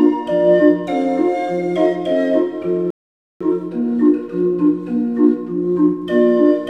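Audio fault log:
2.90–3.41 s: rebuffering stall. The sound halts into about half a second of silence, then picks up exactly where it left off. Playback ran dry waiting for data, so time is added but nothing is lost, unlike a dropout, which skips material.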